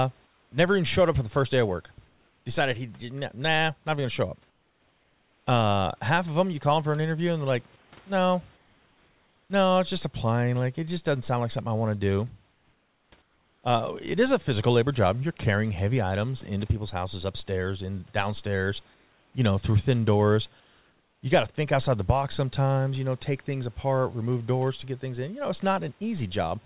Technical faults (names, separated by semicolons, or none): comfort noise in place of the background